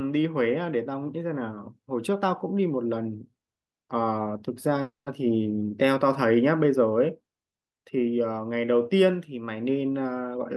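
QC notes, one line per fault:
4.81 to 5.08 s, call audio freeze: the speech stalls for about a quarter second, the last sound stretching into a fading buzz that drops to silence for its final 150 ms before resuming where it stopped, nothing lost. This likely comes from delayed packets draining the jitter buffer, adding 250 ms of delay.
10.27 to 10.56 s, jitter buffer speed-up: the closing speech sounds hurried, running at about 136 percent speed with unchanged pitch. The receiver trimmed roughly 100 ms by cutting short pitch-period pieces repeatedly, shrinking an overfull jitter buffer back toward its target delay.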